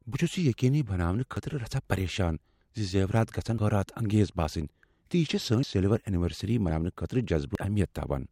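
This speech clip has five abrupt jumps where the sound skips forward with no gap, at 1.37, 3.58 (just after "پریشان ز زیورات گژھن"), 5.63, 6.70 and 7.55 s, each skipping roughly 40 to 150 ms. The likely cause is a dropped buffer (overrun), where captured audio was overwritten before being read.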